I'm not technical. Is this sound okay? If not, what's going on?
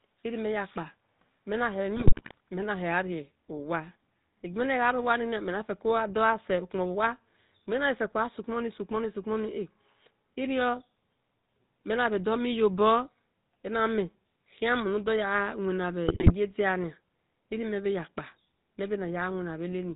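No. The whole recording has the sound of the GSM full-rate codec, the early mobile-phone system: the voice is buzzy and gravelly and there are no crisp high tones. Unlike a plain muffled recording, this roughness sits inside the voice itself.

On top of that there are GSM bit errors from about 1.96 to 2.38 s and again from about 16.08 to 16.32 s. Damaged data from a weak phone link makes the voice briefly squawk, pop and gargle instead of simply dropping out to silence.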